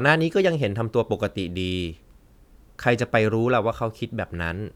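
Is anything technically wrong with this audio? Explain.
No, nothing is technically wrong with this audio.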